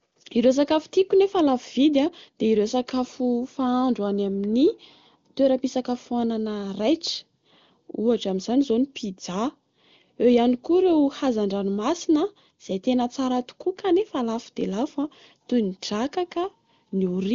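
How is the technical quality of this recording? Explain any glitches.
The technical quality is good, with no glitches to explain, and the sound carries the AMR wideband (HD Voice) codec's usual top limit of about 7.2 kHz.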